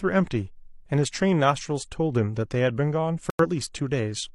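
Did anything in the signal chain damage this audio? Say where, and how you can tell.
Yes: corrupt frame muted at 3.30 to 3.46 s, an abrupt silence in the speech, which fits two damaged codec frames the decoder rejected and blanked.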